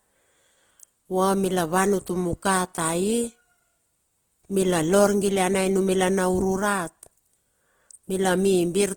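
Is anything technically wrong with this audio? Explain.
Yes. Throughout the speech, the sound is rough and grainy, with plainly audible Opus compression damage even though the spectrum still reaches up to about 20.1 kHz. This is likely Opus in its music (CELT) mode at a bitrate around 16 kbps. With so few bits, the encoder keeps each band's energy but fills the detail with folded copies of lower bands or with noise, so the speech turns gritty rather than swirly.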